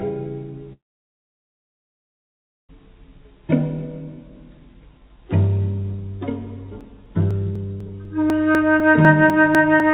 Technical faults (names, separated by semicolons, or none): long network dropout; periodic USB or driver dropouts